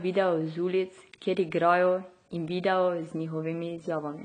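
Throughout the speech, the top end stops dead at about 9.3 kHz, and sibilants sound dull and fizzy with a plainly audible warble, likely from AAC compression at a low bitrate, perhaps near 24 kbps. A spectrogram shows a flat ceiling.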